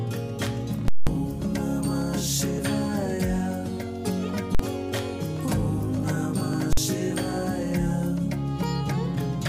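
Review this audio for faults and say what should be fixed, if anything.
Invalid numbers at full scale occur three times. From 0.88 to 1.07 s, the output jumps to one extreme value and holds there for about 186 ms, which fits an 8192-sample block. That gives a very loud pop at each edge with no sound between. At 4.55 to 4.59 s and 6.73 to 6.77 s, shorter blocks of about 46 ms each (consistent with 2048 samples) each come out as a single bang. Something in the processing produced infinite or invalid values, and these were clamped to full scale. The fix is to check each block for invalid values and replace them before output.

There are skips at 2.58 s and 6.54 s. The audio jumps forward with no silence at the join, and roughly 50 ms goes missing at each. The two points are about 4 s apart. That regular spacing points to audio missing between chunks, likely from a recorder or processor that works in 4-second chunks and loses a short stretch while closing one chunk and opening the next. 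The fix is to double-buffer the chunk handover so capture continues without interruption.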